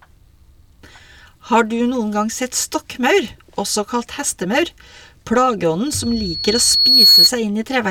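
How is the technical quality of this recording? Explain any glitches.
There's one clear problem: a loudspeaker feedback squeal in the speech from 5.86 to 7.31 s. The mic is hearing its own speaker, so a 4.4 kHz tone swells over roughly a second to about 10 dB above the speech.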